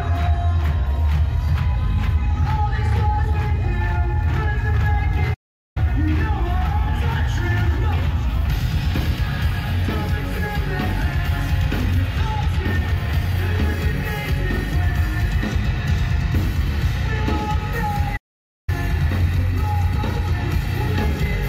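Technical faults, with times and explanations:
5.33–5.77 s and 18.16–18.69 s, playback stall: the sound cuts out mid-flow for about 0.42 s and then 0.51 s before continuing, likely because the player ran short of buffered data or its output thread was briefly blocked, leaving the output silent until it recovered.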